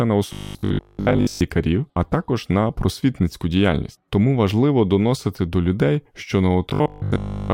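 Audio data likely arrived too seldom, so playback kept looping its last short buffer in place of the missing speech, giving robotic sound from repeated short buffers. From 0.33 to 1.41 s, just before "а також на просвітницьку", and from 6.70 s to the end at 7.53 s, after "доносити до людей що", most of the speech is replaced by repeats. The loop imposes a rigid, metallic 50 Hz buzz, fitting a 20 ms buffer, while the voice still roughly tracks the words.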